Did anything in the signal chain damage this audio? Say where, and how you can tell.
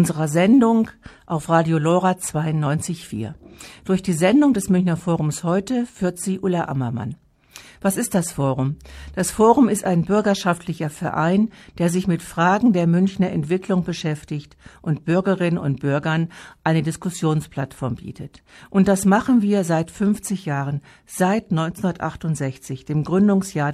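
No, nothing in the signal chain damaged this recording.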